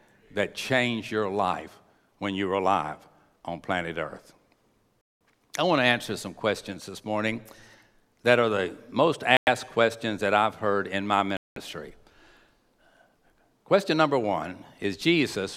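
The speech cuts to dead silence three times and then resumes: for 196 ms from 5.01 s, just before "I want to answer"; for 102 ms from 9.37 s, between "that are the most" and "questions that I've heard"; and for 194 ms from 11.37 s, after "I've heard in my". These are likely Bluetooth stalls, where radio interference delays packets, the headphones' buffer empties, and playback pauses until the resent audio arrives.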